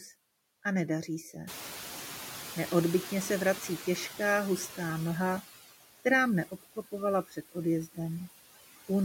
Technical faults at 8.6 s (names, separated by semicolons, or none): noise suppressor artifacts